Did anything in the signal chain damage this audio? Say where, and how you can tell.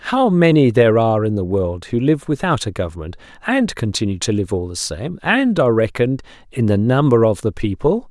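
No, nothing audible here points to damage at any stage between capture and playback.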